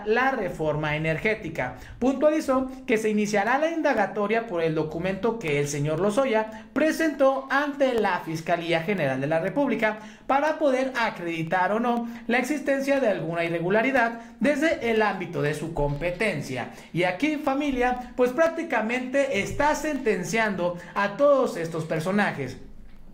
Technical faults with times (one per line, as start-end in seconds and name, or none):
2.97-22.97 periodic USB or driver dropouts